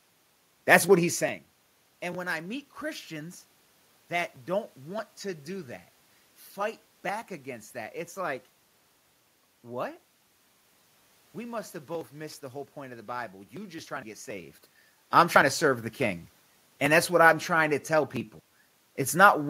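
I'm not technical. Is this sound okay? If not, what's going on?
Yes, nothing stood out as a problem when listening to this recording.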